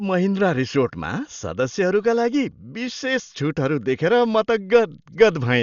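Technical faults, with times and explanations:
Throughout, Dolby Digital compression: the speech has heavy codec damage, and nothing is left above 7 kHz. It sounds dull and boxed in. A rough, fluttering noise clings to the voiced sounds. This is likely from an AC-3 style encoder starved of bits, which fits a stream of about 48 kbps. The encoder narrowed the band and gave many frequency lines no detail. The decoder then filled those gaps with noise, hence the grainy flutter.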